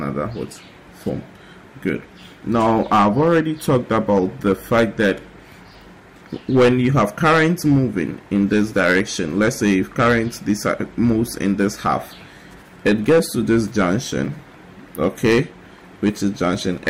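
Hard clipping runs throughout: the signal is driven about 12 dB past what the chain can pass, so roughly 2% of samples are cut flat, adding harsh crackling fuzz on peaks.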